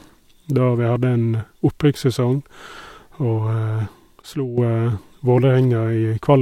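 At 4.22 s the speech drops abruptly in level, by about 11 dB. This is a sudden gain jump. The change happens with no fade. The background noise falls with the speech, so the whole signal sounds turned down at once. At 4.58 s the level returns just as abruptly. The likely cause is a digital gain setting applied instantly, from one sample to the next, without a ramp.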